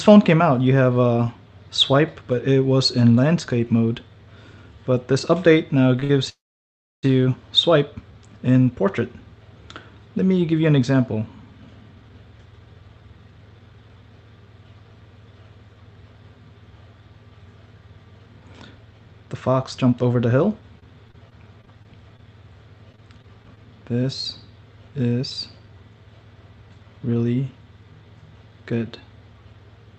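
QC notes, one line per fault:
5.99 to 6.04 s and 6.04 to 6.11 s, short stall from a late packet: The sound is held on for about 23 ms, then 57 ms, with a faint buzz. The jitter buffer ran dry waiting for late packets. Nothing is lost, but the audio is stretched.
6.29 to 7.05 s, call audio freeze: The sound is held briefly, then fades to silence for about 670 ms, about 736 ms in all. Packets likely stalled in transit and the jitter buffer emptied. Playback resumes where it stopped, so a gap is added.
10.30 to 14.25 s, 18.19 to 20.63 s and 23.48 to 27.23 s, jitter buffer speed-up: The audio runs faster at the same pitch, about 108%, then 112%, then 102% speed. The buffer had too much audio queued. Tiny pitch-period slices were cut to reduce delay, roughly a third of a second in each of the first two runs and about a tenth in the last.
20.79 to 23.59 s, repeated packet loss (robotic sound): Choppy sound with small pieces missing. 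There are 13 gaps, the longest 23 ms, about 220 ms lost in total, and about 8% of the stretch is patched. Each gap is filled by continuing the last sound, giving the robotic tone.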